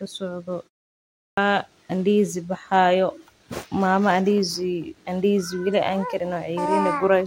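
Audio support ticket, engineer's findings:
Clipped start after a pause, 1.1 s: about 0.27 s of speech lost after a 0.49 s gap. Output device sleeps in silence, wakes late. Waveform shows onset starting abruptly at full level, no attack.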